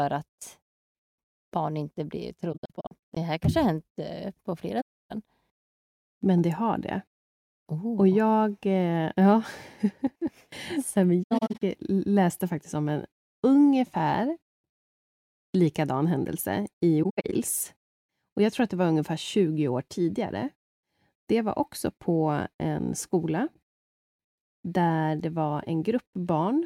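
AAC frame loss with muting leaves clusters of soft-edged gaps at 2.52–3.17 s after "barn inte blir", 4.81–5.12 s after "eh på", 11.23–11.62 s and 17.03–17.34 s. The decoder zeroed the missing frames, so the sound fades out and back in. On a spectrogram these show as blank vertical bands spanning all frequencies, and in the waveform as tapered holes.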